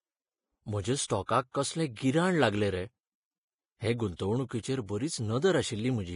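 From start to finish the speech has a hissy, grainy quality, and the treble stops dead at about 10.5 kHz. That's the signature of Vorbis compression pushed hard, likely at a low bitrate somewhere around 26 kbps. The encoder keeps a smooth spectral outline but quantises the upper detail so coarsely that it turns into noise of similar energy. Consonants come out roughened and blurred rather than crisp.

On top of that there's pre-echo, a short hiss leaking in just ahead of sharp onsets. The first bursts are at 1.05 to 1.10 s (about 47 ms) and at 1.26 to 1.29 s, both right before "कसलें गिराण लागलें रे". More follow at 1.52 to 1.55 s, at 1.95 s just before "गिराण लागलें रे", at 4.16 to 4.19 s, and at 4.49 to 4.51 s. When an attack lands late in a transform block, the noise budgeted for the loud part spreads back over the quiet moment before it, which softens and smears the attack.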